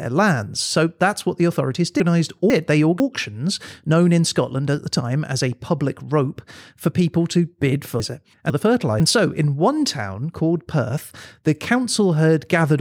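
Speech with chunks out of order at 2.0 to 3.0 s and 8.0 to 9.0 s: two 500 ms chunks swapped, each a jumbled moment, showing three abrupt waveform discontinuities and vertical spectrogram lines.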